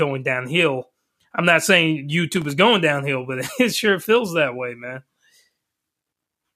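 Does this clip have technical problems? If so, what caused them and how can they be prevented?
Yes. Processor overload crackle from 2.33 to 2.50 s, after "downhill I'm not saying": about ten tiny buffers missed, leaving silent gaps. Reduce processing load or enlarge buffers.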